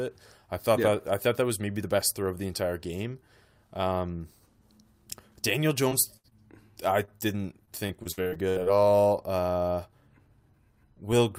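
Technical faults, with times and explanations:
5.89–5.93 s, 6.30–6.33 s and 7.05–7.09 s: short concealed packet loss. Each time about 20 ms of audio failed to arrive in time. The receiver covered the hole by extending the preceding sound, 13 to 23 ms of synthetic fill, then cross-faded back into real audio. Each one is a brief smear or wobble. The one at 6.30 s falls just before "I didn't". A quick consonant at these points can disappear.
6.17–6.26 s: burst of packet loss, just before "I didn't". About 60 ms went missing in one run, too long for a brief patch. The decoder stretched the last sound for about 67 ms and let it fade as the gap continued. A voiced sound turns into a short held buzz, an unvoiced one into fading hiss. Playback then picks up later, and what fell in the gap is lost.
7.65–8.70 s: repeated packet loss (robotic sound), starting right after "I didn't". Across this second, about nine separate gaps open up, the longest about 64 ms, about 280 ms lost in all. 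Each gap is patched by continuing the previous sound, so about 28 percent of the stretch is synthetic. The patches come one after another, which makes the sound choppy, with fragments missing.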